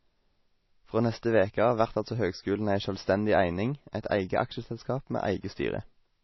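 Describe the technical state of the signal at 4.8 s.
At 4.8 s the speech carries the same damage heard across the whole clip, likely MP3 compression at a low bitrate of around 24 kbps. Short of bits, the encoder removes everything above 5.8 kHz and drops weak frequency lines that flicker in and out between frames, giving a watery, swirling texture, metallic chirps on s sounds and smeared onsets. A spectrogram shows a hard ceiling at 5.8 kHz with patchy, blocky gaps beneath it.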